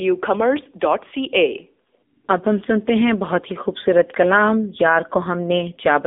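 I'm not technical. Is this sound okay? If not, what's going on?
No, not quite. For the whole clip, the speech has gone through an AMR narrowband mobile codec, the squeezing an older mobile phone call applies. It keeps only a thin slice of the sound, roughly 250 Hz up to about 3.6 kHz, with nothing above about 3.7 kHz, so it sounds boxy and muffled with no crispness. On top of that it's squeezed hard enough that the voice comes out plainly buzzy and a bit artificial.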